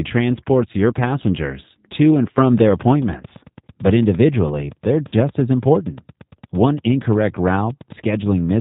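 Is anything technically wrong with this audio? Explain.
Yes. The speech runs throughout through the G.729 codec, consistent with G.729A at 8 kbit/s. Its frame-by-frame filter and pulse modelling leaves nothing above 4 kHz and makes the speech plainly rough and synthetic.

VoIP packet loss concealed by the speech codec occurs at 0.72 to 0.75 s, just before "your passengers to and", and again at 5.08 to 5.14 s. The decoder extrapolates across gaps of about 20 ms and 40 ms, consistent with one and then two lost packets. Each gap becomes a brief buzzy or noisy, fading smear.

A train of clicks starts just after "passengers to and from" and runs from 2.58 to 8.50 s. Around fifty similar clicks arrive at a regular 8.8 per second, peaking a few dB above the speech and ticking through pauses too. The likely cause is electrical interference or a struggling interface.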